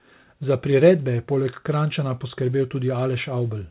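No technical faults are audible.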